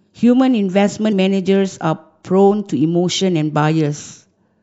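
From start to finish the speech carries plainly audible MP3 compression, likely from an encoder working at around 64 kbps. With so few bits, weak frequency lines drop in and out between frames, leaving a watery, swirling texture and softened consonant attacks.

From 1.09 to 1.13 s, damaged data in the compressed stream produces a short glitch. The decoder hits corrupted frames, loses its place and resynchronises on the next valid header.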